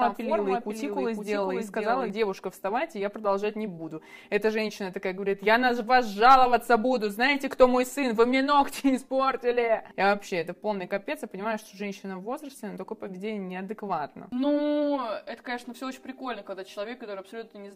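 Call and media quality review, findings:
Doubled audio track, 0 to 2.1 s, already present at clip start. Likely a second, slower capture path or misaligned edit mixing in a duplicate. Full-band copy trails by about half a second, about 5 dB below the original, with no decay or room colouring. Copy cuts off abruptly at 2.1 s.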